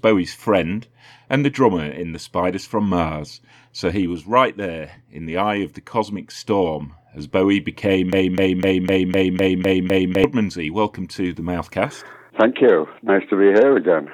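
At 8.13 s the sound gets caught in a broken-record loop: a chunk of about 0.25 s repeats exactly, back to back, eight times until 10.24 s. It's likely a stalled player or stream resending its last fragment, so whatever should have played there is gone.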